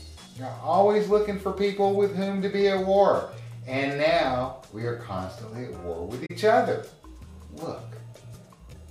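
At 6.25 s the sound fades out and is gone until about 6.31 s, then fades back in: AAC frame loss with muting. About 43 ms of audio is missing, which fits two lost AAC frames in a row. The decoder had nothing for those frames and set their spectrum to zero, so the overlapping windows ramp the level down and up again. That leaves a soft-edged hole, unlike a sample-level dropout, which cuts off abruptly.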